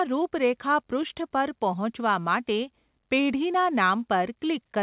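Nothing stood out on listening to this speech, which comes across as ordinary call audio with nothing above about 4 kHz, as expected from the call path it went through.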